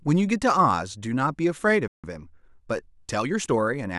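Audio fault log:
1.88–2.04 s, playback stall: the speech cuts to silence mid-flow for about 0.16 s, then resumes. The gap is likely caused by the player running short of buffered data or its output thread being blocked, so nothing reached the device until it recovered.
2.04–3.62 s, time-compressed catch-up: after the stall the speech runs about 1.1 times faster at unchanged pitch. The player is draining its backlog by removing short segments and cross-fading the joins, which hurries delivery without shifting pitch.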